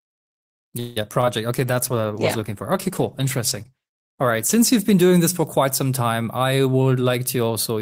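From 0.79 to 0.98 s the sound is stretched into a fading buzz lasting about 167 ms, with no silence. This is likely a call audio freeze: delayed packets drained the jitter buffer, and the receiver extended the last sound until they arrived. The audio then resumes where it stopped, so nothing is lost, but it now runs about 167 ms later.

Two short concealed packet losses follow, at 1.02–1.05 s and 1.21–1.26 s. Each time, 20 ms of audio failed to reach the decoder in time. The receiver synthesised a brief continuation and blended it back into the real signal, leaving a small smear or wobble. The second repair adds a few milliseconds of length.

From 1.57 to 5.85 s a call bitrate drop takes the encoder from 32 to 14 kbps, and it stays at the lowest rate for roughly 2.7 s. The bandwidth estimate fell, so coding became coarser and the top end was trimmed. The sound turns rough or muffled.

From 6.37 to 7.77 s a jitter buffer speed-up plays the audio at 109% speed. 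The receiver cut short pitch-period segments repeatedly, about 150 ms in total, to reduce excess buffering. The result sounds hurried but keeps its pitch.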